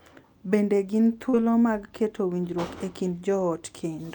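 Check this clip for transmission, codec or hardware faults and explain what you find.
Two network faults occur in quick succession, both just before "mag keto winjruok e".

Short concealed packet loss, from 1.29 to 1.43 s. About 20 ms of the speech never reached the decoder in time, so the receiver covered a 38 ms gap by carrying the previous sound forward, following its pitch where it was voiced and using shaped noise where it was not, then crossfaded back to the real signal. This stretched the timeline by roughly 15 ms and shifted the delay by around 20 ms. It is heard as a brief smear or wobble, and a short consonant in that stretch can drop out.

Short stall from a late packet, from 1.50 to 1.55 s. Here nothing was lost. A packet arrived after it was due, the jitter buffer ran dry, and the receiver held the last sound for 22 ms until the packet turned up, then resumed from the same point. 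This added 22 ms of delay. The result is one sound lasting slightly too long, with a faint buzz or dip in level.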